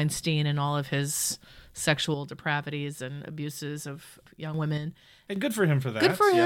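From 2.14 s the speech suddenly drops by about 6 dB and stays low until 4.54 s, then does it again from 4.78 to 5.36 s. That abrupt step is the signature of one channel dropping out, likely one side of a stereo feed going dead. Once the pair is summed to mono, material common to both sides loses half its contribution, and anything carried only by the missing side vanishes.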